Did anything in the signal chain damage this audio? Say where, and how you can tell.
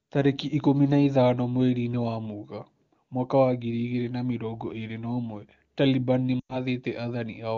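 Yes, at the radio link feeding the decoder. From 6.40 to 6.56 s the speech drops to near silence within two frames, then returns weak and rough for a moment. These are lost AMR speech frames: corrupted frames failed their checksum, so the AMR-WB decoder, which elsewhere sounds clean, consistent with a high-rate mode, repeated its last good pitch and vocal-tract settings at falling gain. The roughly 100 ms gap fits five consecutive 20 ms frames.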